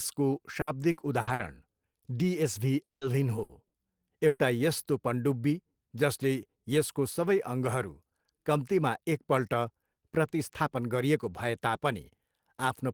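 Repeated packet loss (robotic sound) runs from 0.61 to 1.42 s in this speech recording. Four separate holes open up in under a second, the longest about 60 ms. Each is covered by stretching the previous fragment of sound, so roughly 30% of that span is synthetic fill, about 240 ms in all. The real audio under those holes never arrives, and the quick succession of patches gives the passage a choppy quality. A long network dropout follows at 2.83 to 3.04 s. The last sound is carried on as a decaying buzz or hiss, then the signal falls to near silence before speech picks up again. About 180 ms of the original audio is simply gone. The behaviour is consistent with the connection likely stalling for that moment rather than a local glitch, since the concealment runs out and gives way to quiet. Bursts of packet loss then hit three more times: 3.43 to 3.52 s, 3.67 to 3.76 s, and 4.27 to 4.42 s. 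The first two each drop about 60 ms, and the third drops about 120 ms. In each, the receiver holds and fades the preceding sound as a brief buzz or hiss, and playback resumes past the missing piece, so the speech jumps slightly forward.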